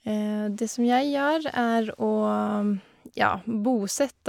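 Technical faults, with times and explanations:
No technical faults can be heard anywhere in the speech. Nothing in the recording or playback chain draws attention to itself at any point.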